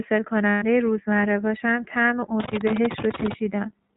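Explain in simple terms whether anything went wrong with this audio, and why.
The whole clip sounds thin and slightly rough, a bit like a phone call, with a faintly synthetic edge to the speech. That is the iLBC codec, a compression scheme built for internet calls. It keeps only the lower part of the sound, nothing above about 4 kHz, so the crisp, airy detail is gone, and it rebuilds each short slice of speech from a simplified model, which is where the roughness comes from.

From about 0.50 to 0.64 s, roughly 0.12 s, the speech turns into a held, slightly buzzy sound instead of moving on normally. Those are lost iLBC frames: pieces of the audio never arrived, so the decoder filled the hole by repeating the last bit of voice mixed with a little noise. Because each iLBC slice is decoded on its own, normal speech returns right after the gap.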